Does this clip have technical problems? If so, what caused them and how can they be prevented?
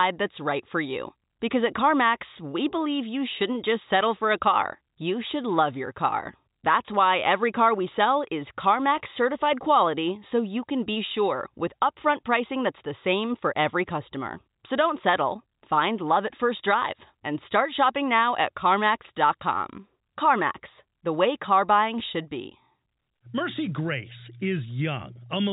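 No, this speech clip has no technical problems that need fixing or preventing. It carries the band limit of G.711 telephone coding, with nothing above about 3.8 kHz, which fits an ordinary 64 kbps A-law telephone channel working as intended.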